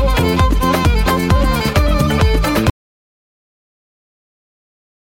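The audio plays and then stops dead at 2.7 s. From there to the end of the clip there is an audio dropout to silence. The gap holds pure silence, with no room tone, hiss or reverb tail, so nothing in that stretch survives. The likely cause is a lost input, such as a disconnected device, a failed link or an accidental mute, while recording carried on writing silence. An ordinary fade or a noise gate would taper off or leave some background noise, but this cut is instantaneous and completely empty.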